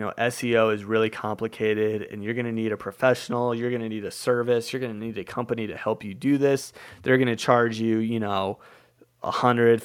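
Speech recording with no audible technical faults.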